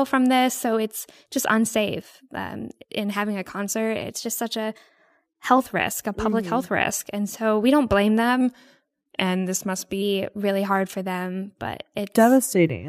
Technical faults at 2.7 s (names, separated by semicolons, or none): none